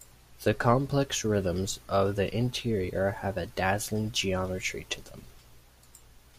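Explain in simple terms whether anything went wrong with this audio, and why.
Listening to the speech here, nothing stood out as having gone wrong.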